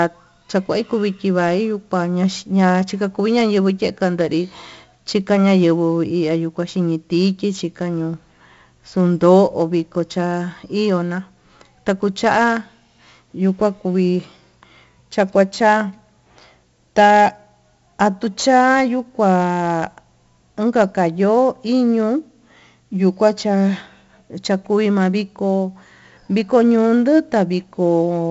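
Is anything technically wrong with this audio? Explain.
Yes. Throughout, a gritty hiss tracks every loud syllable, sharp onsets crackle, and the speech sounds dull, with nothing above 7.7 kHz. This is heavy 4-bit ADPCM compression: coarse steps from a prediction lag behind fast attacks, and the low sample rate points to about 64 kbps.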